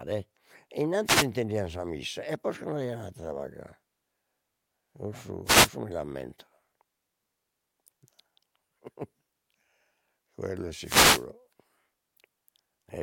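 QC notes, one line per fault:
1.05–1.27 s, 5.45–5.70 s, 10.81–11.26 s: wireless microphone noise hits, three short swishes of static just before "sa missa e posca", just before "mi l'ammento" and right after "quello è". Each is a fade in the analogue FM radio link, where reflected paths cancel the signal so receiver hiss rises over the speech for 0.22 s, 0.25 s and 0.45 s. On a spectrogram each shows as a broadband vertical smear of noise. On the waveform the noise floor briefly thickens.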